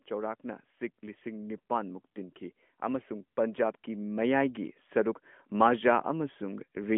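Just after "ꯂꯤꯁꯤꯡ ꯅꯤꯄꯥꯟ ꯃꯨꯛ ꯇꯤꯟꯈꯤ", at 2.8 s, automatic gain rising begins. The gain control judged the input too quiet. It pushed its gain up slowly, not in one step. By 5.26 s the level has climbed by about 7 dB. The speech and the background noise swell together over those two and a half seconds. The band stays narrow throughout, with nothing above 3.6 kHz, as on a mobile call.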